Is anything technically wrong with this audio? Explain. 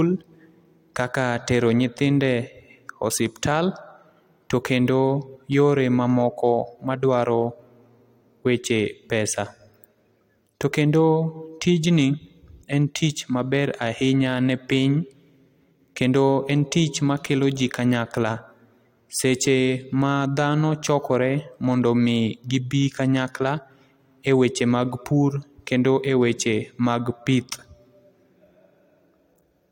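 No, nothing technically wrong can be heard here.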